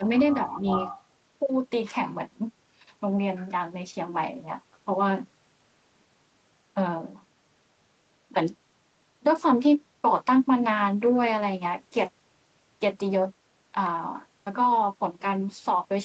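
A speech recording whose opening second carries two faults. From 0.0 to 0.11 s the speech dips by roughly 10 dB, sounding briefly pulled down before it recovers. The likely cause is speech suppressed in double talk: with both ends active at once, the loudspeaker side's echo canceller could not tell its own talker from the loudspeaker sound and attenuated everything for that moment. Then, from 0.47 to 1.04 s, a second, delayed copy of the speech trails the original by about 358 ms, sitting only about 5 dB below it. This is likely an echo leak: one side was playing the call over a loudspeaker, and its echo canceller failed to remove all of what its microphone picked up, so that residue was sent back into the call.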